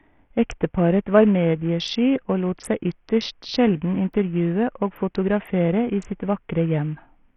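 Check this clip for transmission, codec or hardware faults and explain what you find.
One codec fault runs through the whole speech clip. From start to finish the treble flickers and a gritty, heavy quantisation noise with aliasing rides on the speech, with nothing above 16.5 kHz. That likely points to Bluetooth SBC compression, whose coarse fixed sub-bands starve the top bands at a low bitrate, around 48 kbps. Unlike a plain low-pass, the grit and aliasing set it apart.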